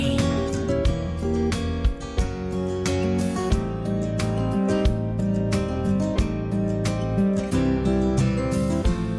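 No audible technical faults here: level, continuity and timing all hold steady throughout the sound, with nothing that calls for correction.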